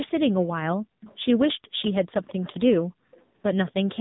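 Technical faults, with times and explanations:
Throughout: AMR narrowband mobile codec. Nothing passes above 3.8 kHz, a hard ceiling on a spectrogram. Heavy buzzy, synthetic coding fits a low bitrate near 6.7 kbps.
0.78–1.01 s, 1.46–1.80 s, 2.85–3.14 s: background gated by the echo canceller. The room sound drops by about 40 dB, visible as near-silent notches in the waveform's noise floor.
1.01–1.16 s, 1.80–1.94 s, 3.14–3.18 s, 3.67–3.72 s: echo leak. Faint copies trail 228 ms behind, roughly 25 to 30 dB down, likely residual loudspeaker echo the canceller missed, as ghost striations on the spectrogram.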